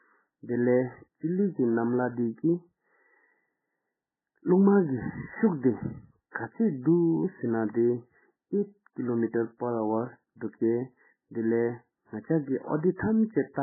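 From start to finish the speech sounds dull and watery, with nothing above 2.1 kHz and a swirling, smeared quality. This is likely heavy MP3 compression at a starved bitrate around 8 kbps, forcing the encoder to cut the treble and drop weak frequency components frame by frame.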